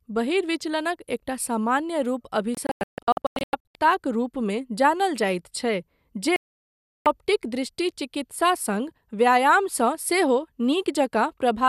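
Digital broadcast dropouts break this speech clip from 2.55 to 3.75 s, where about 744 ms goes missing in scattered short holes (longest 144 ms), and from 6.36 to 7.06 s. Both times the receiver muted on lost or corrupted frames, discarding that programme.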